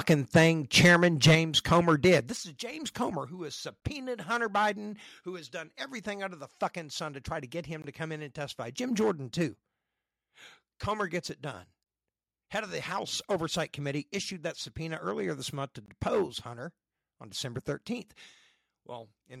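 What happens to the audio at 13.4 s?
At 13.4 s the speech is hit by hard clipping, present across the whole clip: peaks driven about 9 dB past full scale are cut flat, adding a harsh crackle on louder syllables.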